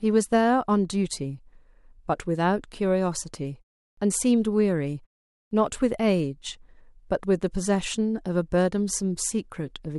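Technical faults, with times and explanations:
3.92 s and 5.46 s, clipped start after a pause: after silences of 0.37 s and 0.48 s, the speech resumes with roughly 54 ms and 53 ms of its onset missing, as the output path, having dropped into a low-power idle during the gap, takes that long to wake and lock before passing audio. The waveform jumps from silence straight into the speech with no rising attack, and the spectrogram shows a hard vertical edge where the first sounds should be.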